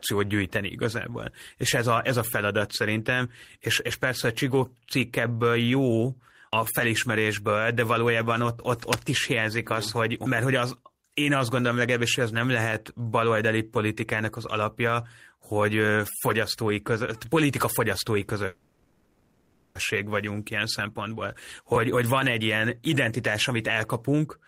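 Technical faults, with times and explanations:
8.77–9.09 s: cable scratch noise. Between "felismerésből de valójában ott" and "is hiányzik az hogy", a dense, uneven rustle sits over the speech at about 5 dB below it. This is likely a worn cable or connector being moved, its contact resistance jumping rapidly.
18.47–19.78 s: call audio freeze. Just after "fogyasztói között politika fogyasztói", the last sound is held as a fading buzz for about 1.28 s. This is likely delayed packets emptying the jitter buffer. Speech then resumes where it stopped, with nothing lost, just later.
20.57–21.16 s and 21.95–24.29 s: jitter buffer speed-up. The speech runs faster at unchanged pitch, about 8% then 10% quicker. Tiny pitch-period slices are cut repeatedly, roughly 50 ms then 200 ms in total, shrinking the backlog left by the freeze. It sounds hurried.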